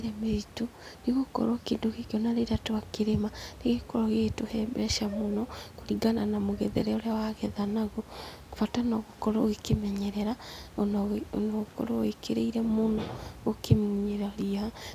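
No system faults are audible anywhere in the speech, and the only steady background is ordinary room noise sitting about 27 dB below the talker.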